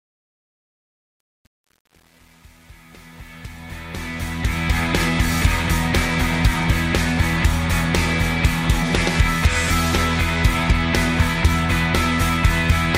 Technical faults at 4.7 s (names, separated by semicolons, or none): truncation distortion on a fade